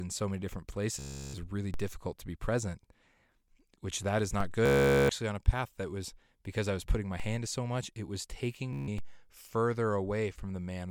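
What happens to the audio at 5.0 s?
A Bluetooth stutter runs from 4.66 to 5.09 s. Data went missing, so the receiver kept replaying its last short buffer. That makes a rapid machine-gun buzz. About 0.44 s of speech is lost, which fits roughly 30 dropped packets. Speech resumes at "on a path that".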